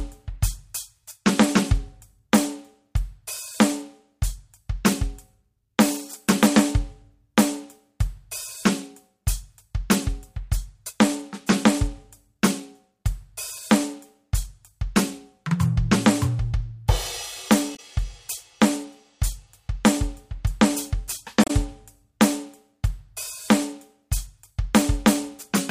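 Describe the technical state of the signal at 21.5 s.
At 21.44 to 21.51 s the music breaks briefly: damaged data in the compressed stream, which the decoder misreads before regaining sync, heard as a chirp, squawk, click or short hole.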